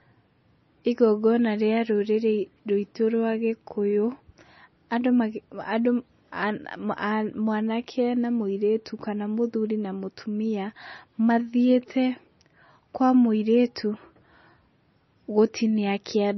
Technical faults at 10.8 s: MP3 compression

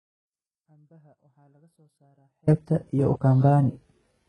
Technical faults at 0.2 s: HE-AAC compression; audio dropout to a faint residue

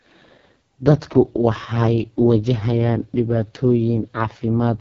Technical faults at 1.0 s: AMR wideband (HD Voice) codec

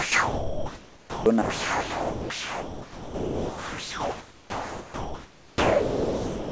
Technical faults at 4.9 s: sound dropped by the voice detector

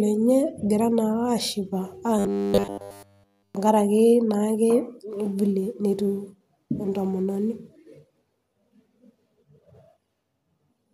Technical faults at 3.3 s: robotic sound from repeated short buffers

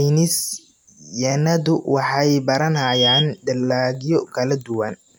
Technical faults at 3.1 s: loudspeaker feedback squeal

